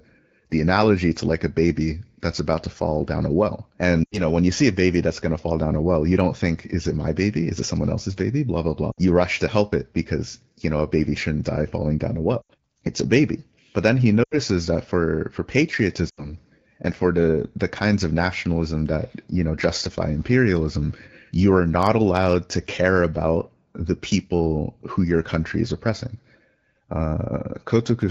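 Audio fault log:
4.04–4.20 s, 8.91–8.99 s, 12.41–12.50 s, 14.23–14.37 s, 16.09–16.33 s: lost AMR speech frames. About 60–80 ms of corrupted audio per event, which fits three or four 20 ms frames, is rebuilt from stale pitch and vocal-tract settings, so the speech smears briefly and fades quickly in this AMR-WB stream.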